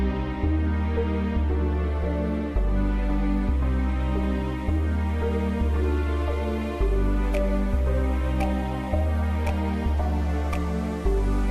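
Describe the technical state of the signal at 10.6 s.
At 10.6 s the signal is intact, with no audible fault at that moment.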